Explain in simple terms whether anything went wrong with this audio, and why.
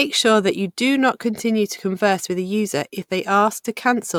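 Nothing went wrong with this audio: there's no fault to hear anywhere in the recording.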